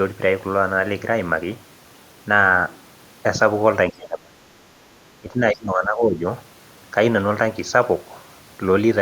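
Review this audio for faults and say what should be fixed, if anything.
Speech suppressed in double talk, 3.9–4.4 s and 5.21–6.26 s: the speech drops by about 30 dB, then about 15 dB, likely because an echo canceller ducked overlapping talk. To prevent it, improve the canceller's double-talk detection or reduce loudspeaker echo so it doesn't treat near-end speech as echo.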